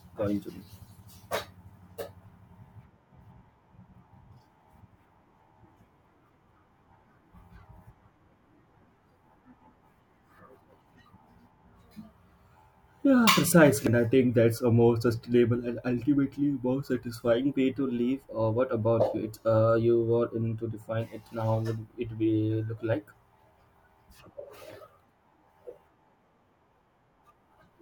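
Speech, with compressed frames skipped at 13.87 s: about two frames of roughly 85 ms each were never decoded, so the audio jumps ahead about 150 ms.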